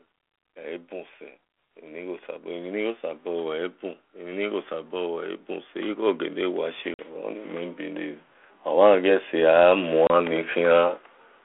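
Automatic gain rising, from 0.41 to 7.14 s: the gain control judged the level too low and kept raising its gain, by about 13 dB over those seven seconds, so the voice and the background noise swell together. Packet loss on an ADPCM call at 6.94 s leaves a hard-edged 50 ms hole, which fits a handful of lost packets. When the sound resumes, the decoder's predictor and step size no longer match the sender's, so there is some distortion before the audio settles. Automatic gain rising again, from 7.77 to 10.84 s: the level climbs by about 6 dB, and the background lifts with it. Packet loss on an ADPCM call recurs at 10.07 s as a 30 ms gap, which points to a few packets. The same brief mis-step follows as the decoder recovers. All of this sits on a 32 kbit/s G.726 line limited to 300 Hz to 3.5 kHz, which adds light coding damage.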